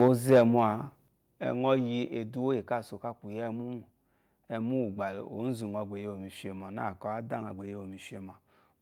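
From the start to 0.42 s the speech shows microphone overload: the loudest syllables carry a harsh, crackling edge, and on the waveform their peaks are sliced flat against the ceiling, about 4 dB past what the converter could hold, with a few percent of samples pinned there. The input volume was likely set too high, and on a spectrogram the clipping appears as a smear of bright broadband energy above the harmonics on those syllables.

Inside that stretch, at 0.08 s, the level of voice and background together drops abruptly by about 2 dB, then again at 1.08 s by about 6 dB and at 2.1 s by another 2 dB. This is the microphone volume stepped down, likely by call software reacting to the distorted peaks and cutting the device's input volume. Each step reads on the waveform as a sudden narrowing of the envelope and on a spectrogram as a vertical boundary where everything, noise floor included, dims at once.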